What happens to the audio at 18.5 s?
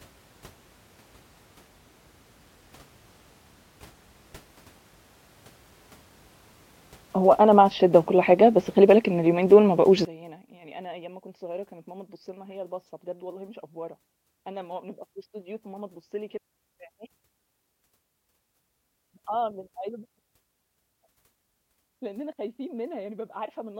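From 10.05 s to the end, 18.5 s included, the speech sinks about 23 dB into a faint residue, likely one channel inverted cancelling the other in mono.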